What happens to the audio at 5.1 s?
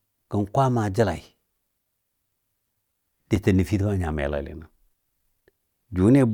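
Periodic USB or driver dropouts run from 2.34 to 5.42 s, so 5.1 s falls between losses. About every 1.02 s a stalled bus or driver drops a couple of milliseconds of speech, leaving a silent gap. The next gap comes at 5.41 s. Each one that lands on speech is heard as a tick and shows as a thin vertical notch in the waveform and a narrow broadband line on the spectrogram.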